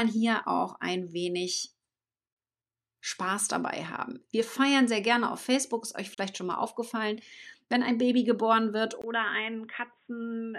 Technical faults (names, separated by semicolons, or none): gap at a join of encoded pieces; input switched to a poorer device